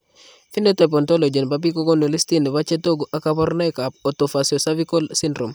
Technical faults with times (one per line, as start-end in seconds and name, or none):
2.22 electrical switching spike